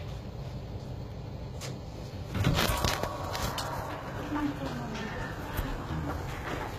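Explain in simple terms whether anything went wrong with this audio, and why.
HE-AAC compression, likely, throughout: the highs are rebuilt from copied lower bands, so treble sounds gritty and metallic, with nothing above 14.9 kHz.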